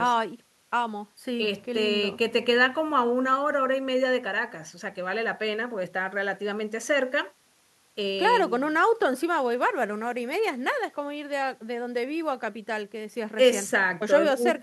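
No technical faults are audible anywhere in the speech.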